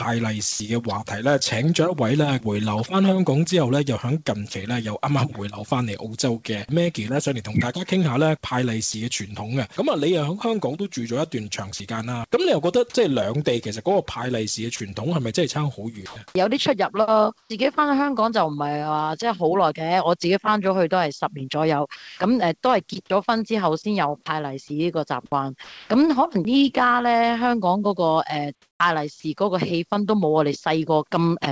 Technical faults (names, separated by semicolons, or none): sound dropped by the voice detector; sound chopped by the voice detector; onset clipped by the voice detector; comfort noise in place of the background